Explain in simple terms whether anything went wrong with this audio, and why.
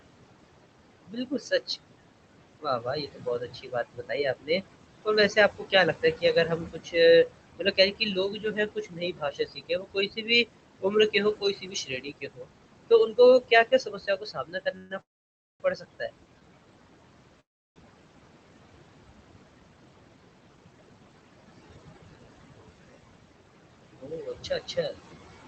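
Several things went wrong, all likely caused by the processing in the call system rather than by the recording itself.

Noise suppressor artifacts run through the whole clip. The room has real background noise, and a noise suppressor keeps turning it down and back up in small slices of time and frequency. Between phrases the background drops away, then comes back under the speech. Unlike the cuts below, this affects the background rather than removing parts of the speech.

Speech cut by the noise suppressor happens at 1.06–1.61 s, 2.6–4.64 s, 5.05–6.95 s, 7.31–12.49 s, 12.9–16.1 s and 23.99–24.96 s. Here the suppressor mistook quieter parts of the speech for noise and turned them down with the background. Soft consonants, word endings and quiet syllables sound swallowed or faded. The sound doesn't stop or stretch. It just goes faint in places, which is what separates this from a freeze.

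A call audio freeze occurs three times, most likely because data packets were held up in the network. At 14.77 s the sound hangs on as a brief smeared continuation for about 0.13 s. At 15.01 s there is a gap of about 0.6 s, and at 17.40 s another of about 0.36 s, both mostly silent. After each gap the speech picks up exactly where it left off, so nothing is lost. A pause has been inserted into the audio, not a chunk cut out of it.

Jitter buffer speed-up runs from 19.44 s to 22.17 s. The receiver had built up a backlog of audio. To catch up, it snipped out many tiny slivers, about 0.3 s in total, so this stretch plays about 12% faster. The pitch stays the same, so the speech doesn't sound higher like a sped-up tape. It just sounds hurried. This is the reverse of a freeze: time is squeezed rather than stretched.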